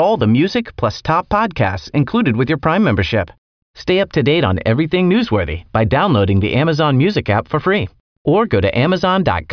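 No technical faults occur anywhere in this speech recording.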